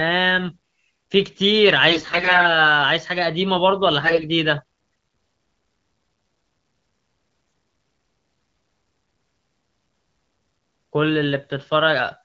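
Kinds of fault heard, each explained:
AMR bit errors: Bits in the coded frames arrived flipped, yet the check over the most important bits still passed. So the decoder used the damaged data. Its excitation pulses land in the wrong places, and the finer pitch, gain and spectral values drift. The speech keeps roughly its pitch and level but turns hoarse, scratchy and gargly. This happens from 1.89 to 2.49 s and again from 4.01 to 4.23 s. Around one bit in seven arrived flipped.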